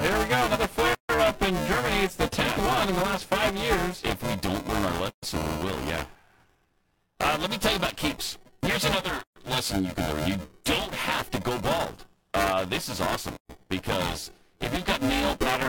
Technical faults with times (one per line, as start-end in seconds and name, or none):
0.00-15.69 buffer tearing
0.94-1.09 gap at a join of encoded pieces
5.09-5.23 gap at a join of encoded pieces
9.23-9.36 gap at a join of encoded pieces
13.36-13.49 gap at a join of encoded pieces